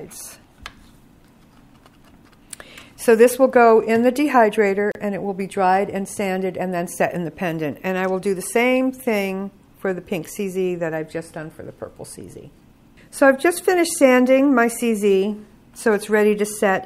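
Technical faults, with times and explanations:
4.92 s to 4.95 s, gap at a join of encoded pieces: two separately encoded sections were butted together with the encoder's start-up delay and final-frame padding left in, so a break of about 35 ms opens in the continuous sound, its edges smeared by the codec, before the audio resumes where it stopped.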